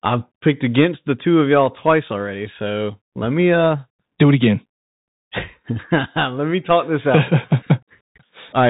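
Throughout, a Bluetooth CVSD headset codec, fitting a 64 kbps link, band-limits the speech below 4 kHz, making s sounds scratchy over a granular hiss.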